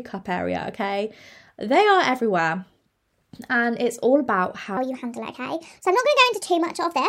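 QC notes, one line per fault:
4.77 to 7.09 s, section at the wrong speed: right after "it's all about" the speech turns high and rushed, running 1.37 times too fast and about five semitones sharp, since speed and pitch shift together; likely played or edited against the wrong clock rate.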